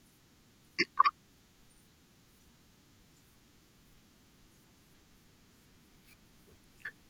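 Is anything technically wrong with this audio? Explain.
No, nothing technically wrong can be heard here.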